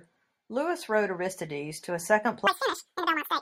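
Audio read two samples at a time (double speed) starts at 2.47 s, right after "to a", and lasts to the end. From that point the playback takes each pair of samples as a single frame, as if the stream had two channels or samples twice as wide, so the speech runs at 2x speed and jumps up 12 semitones, a full octave.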